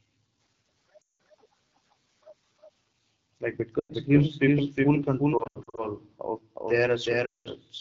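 Throughout, the speech carries a second, full-band copy of itself about as loud as the original and trailing it by roughly 0.4 s, most likely a doubled audio track from a second capture path or a misaligned edit. Unlike a room echo or reverb, the copy has no decay tail and no room colouring. It sounds like a clean duplicate stepping on the original.

The whole clip also has the sound of the AMR wideband (HD Voice) codec at 8.85 kbit/s, one of its two lowest rates, and the damage is plainly audible. Speech reaches up to about 7 kHz, which separates it from narrowband phone audio. The top band above about 6.4 kHz is filled with noise rather than real detail, and the voice has a rough, raspy, buzzy texture from the low-rate pulse model.

Lost AMR speech frames then break in four times. From 1.01 to 1.20 s, 180 ms goes missing. From 3.79 to 3.93 s, 100 ms is lost just before "gives people full". 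From 5.38 to 5.91 s, just after that phrase, about 220 ms of losses are scattered over 400 ms, with the longest run 80 ms. The last is from 7.26 to 7.48 s, where 200 ms is lost. Unlike a hard dropout, each gap fades to near silence within two frames, and the voice returns weak and rough for a moment.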